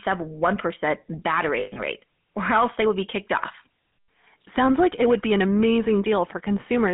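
GSM full-rate codec throughout: the speech passes through a 150 Hz to 3.5 kHz band, and an excitation model built from regularly spaced pulses, which fits a 13 kbps full-rate coder, lays a plainly audible buzzy, gravelly roughness over every syllable.

Lost GSM frames from 1.6 to 1.8 s: about 140 ms of the coded stream is missing across a 160 ms stretch, the longest gap about a tenth of a second. Each gap is filled by repeating the last good frame, so the sound freezes into a rough, metallic ring before the speech resumes.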